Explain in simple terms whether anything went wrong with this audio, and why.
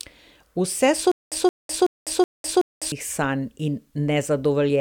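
From 1.12 to 2.92 s, a 172 ms scrap of speech repeats five times, each followed by 202 ms of dead silence, before "sanj in". This stutter with silent gaps likely comes from a stalled player replaying its last fragment, losing the audio meant for that stretch.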